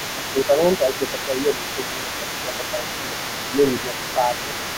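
From the start, the echo canceller likely fails to clear the far end's loudspeaker playback from the microphone, so the other side's voice leaks through for the whole clip. It sits roughly 10 dB below the talker.

Speech is suppressed in double talk when both sides are active, likely because the canceller cannot separate the talker from that echo. It turns the speech down by about 5 dB at 0.0–0.6 s, by up to about 10 dB across 0.79–3.18 s, and briefly at 3.51–3.59 s and 3.82–4.53 s, leaving dips and dulled, broken stretches.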